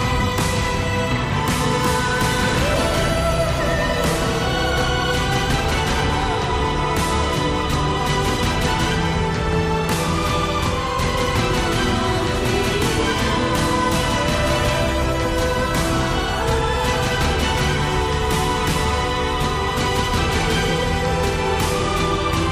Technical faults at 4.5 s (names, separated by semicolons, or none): none